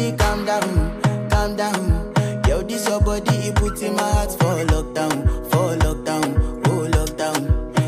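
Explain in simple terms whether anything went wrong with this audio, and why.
Nothing went wrong with this audio. No faults can be heard at any point in the recording.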